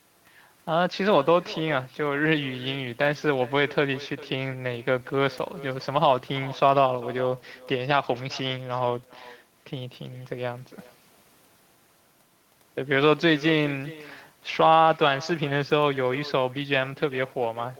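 From start to finish, the speech is trailed by echo with no canceller. The far end is playing the call through a loudspeaker, its microphone picks that sound up, and nothing subtracts it, so each phrase returns after the network round trip, roughly four tenths of a second later and about 20 dB down. Room reverberation would smear into the sound continuously; this is a distinct, thinner repeat.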